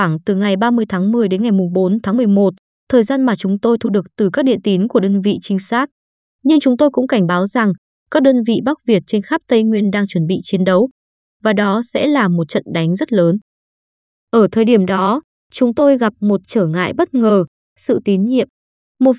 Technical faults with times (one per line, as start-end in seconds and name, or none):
none